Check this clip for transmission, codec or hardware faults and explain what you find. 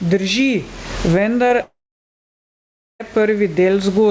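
Three faults are audible in this speech clip: level pumping throughout, a brief concealed gap, and a long dropout. The G.722-style band limit, with nothing above 8 kHz, and room noise about 33 dB below the speech belong to the normal path.

Gain pumping runs through the whole clip. The gain is pulled down on every loud syllable, with a swing of around 20 dB, leaving loud and quiet parts squashed together. The likely cause is input gain set far too high, with a fast limiter clamping each peak.

Short concealed packet loss occurs from 1.48 to 1.52 s. About 20 ms of audio never arrived in time, and the decoder bridged it by extending the preceding sound before crossfading back. It is heard as a small smear or wobble in the speech.

A long network dropout runs from 1.62 to 3.02 s, likely from the stream stalling on the network. The last sound is stretched into a fading buzz or hiss, then roughly 1.26 s of near-silence follows. 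The speech resumes afterwards with that stretch missing.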